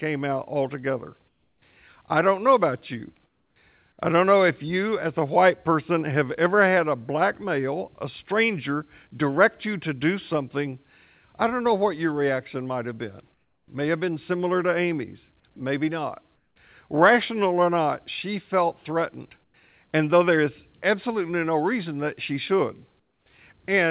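Speech, band-limited to 4 kHz, which fits a narrowband telephone codec. Comfort noise replaces the background in six pauses: 1.28–1.62, 3.26–3.56, 13.34–13.68, 16.36–16.56, 19.44–19.54 and 23.0–23.26 s. Each gap turns to steady, featureless noise, about 7 to 9 dB quieter, likely from discontinuous transmission.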